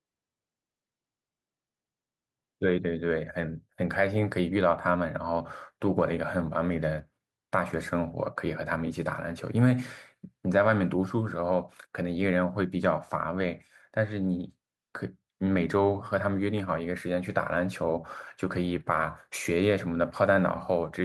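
There are no technical faults to describe at any point in the speech.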